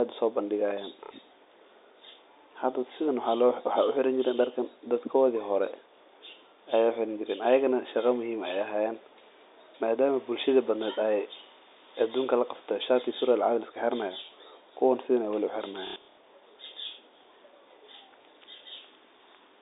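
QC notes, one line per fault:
1.05 to 1.11 s, packet loss with last packet repeated: a short 60 ms gap gets patched by replaying the previous chunk, which fits two 30 ms packets. The replay doesn't line up with the pitch cycle, so you hear a quick robotic stutter.
15.87 to 16.17 s, packet loss with last packet repeated: about 210 ms goes missing, scattered over 300 ms, with the longest run at 90 ms. The repeats pile up into a buzz of roughly 33 Hz, under the narrow telephone band of the G.711 line.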